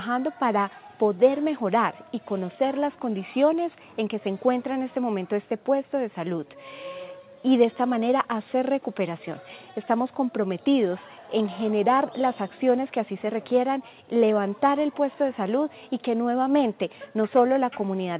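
Nothing is technically wrong with this audio, which has come through a G.711 mu-law call path that carries nothing above 4 kHz.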